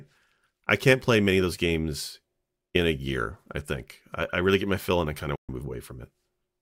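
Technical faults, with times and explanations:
5.36–5.49 s, digital broadcast dropout: the speech fades out over about 3 ms into 128 ms of silence, which fits roughly four lost 32 ms frames. The receiver muted instead of concealing, so there is true silence with no smeared or repeated sound, and the missing audio never returns.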